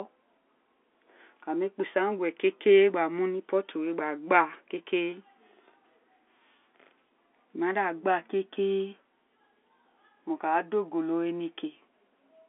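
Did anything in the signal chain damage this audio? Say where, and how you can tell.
No, nothing in this telephone-band speech stood out as damage on listening.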